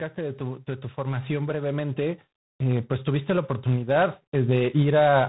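Throughout, tandem speech coding is audible. The speech was coded twice in a row, which fits G.726 coders, leaving nothing above 3.9 kHz. It sounds rough and noisy.

From 0.14 to 5.24 s, automatic gain rises. The gain control slowly lifts the level by about 11 dB. Voice and background swell together.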